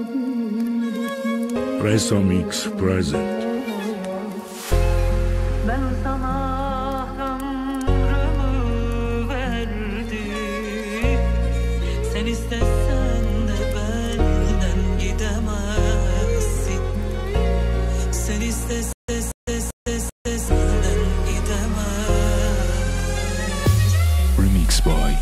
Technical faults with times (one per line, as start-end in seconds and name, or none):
18.93-20.48 stutter with silent gaps